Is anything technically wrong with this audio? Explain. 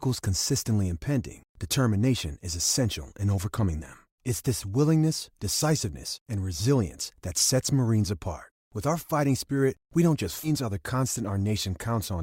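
Yes. At 10.43 to 10.49 s the speech jumps abruptly forward with a brief blip, likely a stream segment skipped, where one chunk failed to load and playback resumed at the next. The waveform shows a hard discontinuity, and the spectrogram a sharp vertical seam.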